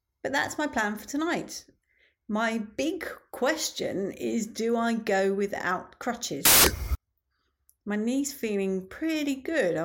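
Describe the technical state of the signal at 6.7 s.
At 6.7 s the speech is replaced by loud, harsh broadband noise from samples built from the wrong bytes, spanning 6.45 to 6.95 s. The bytes are misassembled, so fast-changing low bits dominate each value.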